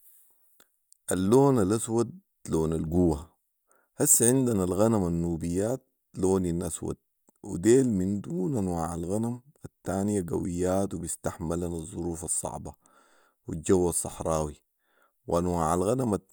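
At 2.87 s the level jumps by about 5 dB in a single step, and it holds until 3.26 s. This is a sudden gain jump. The speech and background noise rise together, with no ramp. A digital gain change applied instantly is the likely cause.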